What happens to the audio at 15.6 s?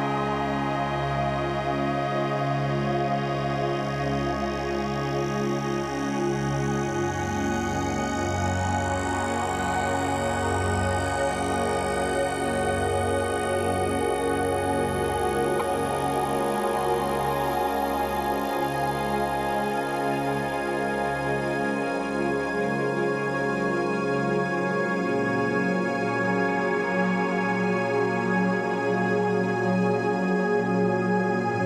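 Right around 15.56 to 15.61 s there's a quick burst of damaged data in a compressed stream, lasting only about 56 ms. A stretch of the encoded bytes got corrupted, so the decoder chokes on those frames, loses its lock on the stream, and has to hunt for the next valid frame header before it can carry on. What you hear is a brief chirp, squawk, click or short hole cutting into the sound.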